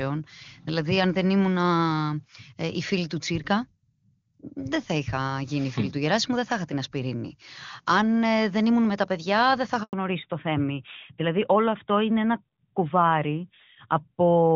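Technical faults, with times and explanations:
9.83 to 9.93 s, handover gap: right after "τα παιδιά δεν θα" the speech cuts out for 100 ms while the call is passed from one network to another and no speech frames reach the receiver. The sound fades within a few tens of milliseconds and then stays silent, so whatever was said in that moment is gone. On the waveform this is a short flat stretch after a quick taper. On the spectrogram it is a narrow vertical band with no energy at any frequency.
9.93 to 14.55 s, fallback to narrowband: from the moment the link resumes, the call has dropped from HD Voice (AMR-WB at a rate that fits 23.85 kbit/s, which until then is clean) to the older AMR-NB codec at a rate that fits 12.2 kbit/s. Nothing above 4 kHz survives, so sibilants lose their crispness and the speech turns duller and rougher. On a spectrogram the upper band empties abruptly at the join, leaving a hard ceiling at 4 kHz for the rest of the clip.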